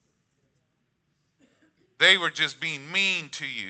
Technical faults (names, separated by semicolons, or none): none